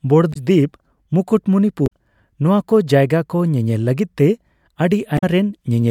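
Speech, broken three times by damaged data in a compressed stream: brief glitches at 0.30–0.37 s, 1.84–1.91 s (just before "ᱱᱚᱣᱟ ᱠᱚ ᱡᱟᱭᱜᱟ") and 5.15–5.24 s. Corrupted bytes made the decoder misread frames and hunt for the next valid header. On a spectrogram each glitch is a short break cutting across the speech harmonics. On the waveform each appears as a jagged, discontinuous patch.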